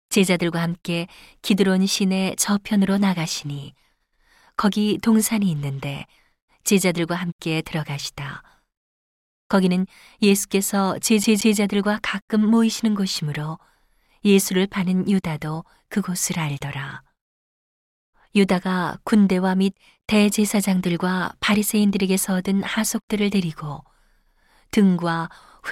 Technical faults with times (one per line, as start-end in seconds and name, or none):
11.24-11.58 CD stuck on one turn